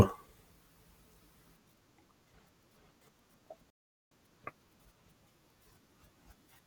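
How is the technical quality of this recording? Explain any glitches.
The speech cuts out abruptly from 3.70 to 4.11 s, leaving about 0.41 s of dead silence in mid-flow before the sound picks up again. This is a playback stall: the silence points to the player likely running short of buffered data, or having its audio thread held up, so nothing reached the output until it recovered. It is heard as a sudden hole in the audio rather than a fade.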